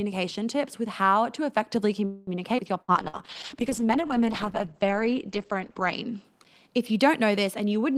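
A call audio freeze runs from 2.05 to 2.30 s, right after "with how to effectively". The sound stalls, and the last sound is drawn out into a fading buzz or hiss for about 220 ms. It then resumes exactly where it stopped, with nothing lost. The likely cause is packets held up in transit, which let the jitter buffer run dry. The result is a gap inserted into the audio rather than a cut.

At 2.57 to 2.61 s comes a skip ahead. Roughly 70 ms of audio is dropped while later audio was already queued, and only about 8 ms of fill bridges the join. Playback lurches forward, splicing the two sides of the cut almost directly. This also undoes part of the delay the freeze had added, trimming roughly 50 ms.

A burst of packet loss follows from 2.82 to 2.91 s. About 60 ms of audio never arrived in time. The receiver stretched the last sound over the hole for about 60 ms, concealing it as a held buzz or hiss that fades out. 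Then the sound picks up further along, with the in-between portion gone.

From 2.93 to 3.35 s a jitter buffer slow-down sets in. With its reserve depleted, the receiver repeats single pitch periods and slivers of pause many times over. This adds about 67 ms and plays the passage at roughly 86% speed. The pitch stays the same, but sounds become drawn out.

A call bitrate drop begins at 2.95 s and lasts until 6.30 s, just before "if you don't". The bandwidth estimate fell, so the encoder went from 40 kbps down to 11 kbps and stayed at that low rate for about 3 s. The audio band also narrows from 20 kHz to 8 kHz. Coarser coding and the missing top end make the sound rough, watery or muffled until the rate climbs back.

Within that stretch, a second burst of packet loss hits from 3.08 to 3.16 s. Another roughly 60 ms is lost and concealed by about 53 ms of fading, continued sound before the audio jumps onward.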